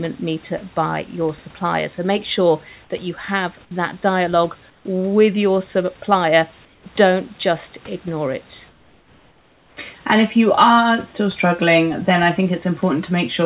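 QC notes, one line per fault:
4.70–4.85 s, 6.65–6.86 s and 8.69–9.77 s: comfort noise in place of the background. In the pauses after "you have that dialogue", "dialogue with your supplier" and "just ignore it", the real room hiss gives way to a flat, detail-free noise about 4 to 6 dB quieter, lasting 150 ms, 210 ms and 1.08 s. The likely cause is discontinuous transmission: the sender stops sending while no speech is detected, and the receiver fills each gap with synthetic noise shaped roughly like the background.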